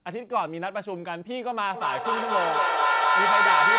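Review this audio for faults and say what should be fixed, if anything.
From 1.74 s to the end, the clip has feedback echo between two devices. Two devices in the same room share the call. One plays the far side through its speaker, and the other's microphone sends it back. Each echo canceller only removes its own playback, so the loop stays open. Repeats come about every fifth of a second. They build rather than fade, peaking about 8 dB above the speech. The band-limited, telephone-like tone, with nothing above 4 kHz, fits a G.711 link. To prevent it, mute or leave all but one device in the room, or use headphones.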